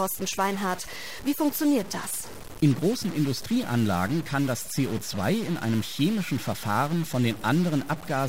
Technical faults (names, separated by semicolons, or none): stuck bit